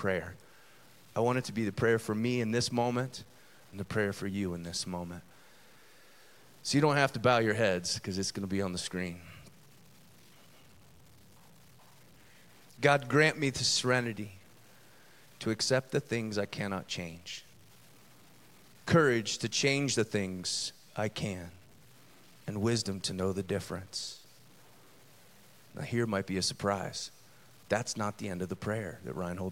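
From start to finish, the speech carries a grainy distortion that moves with the sound. It is the sound of low bit depth without dither. The grit is strongest on quiet syllables and decaying endings, and the softest moments sputter or drop to silence. The error sits roughly 30 dB below the signal. The cause is likely coarse quantization by truncation with no dither, which fits about 9 bits. The error therefore tracks the waveform rather than forming a steady hiss.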